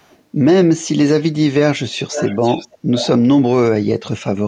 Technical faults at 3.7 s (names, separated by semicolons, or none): none